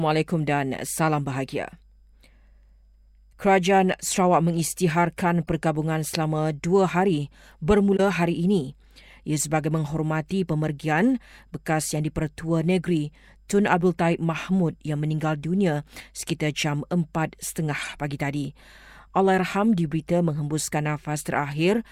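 Damaged compressed frames were decoded and played anyway (corrupt frame decoded), putting energy at wrong frequencies: a faint glitch at 5.46–5.49 s before "selama dua hari", a loud glitch at 7.96–8.0 s before "hari ini", and a several-frame burst at 17.81–17.94 s before "pagi tadi".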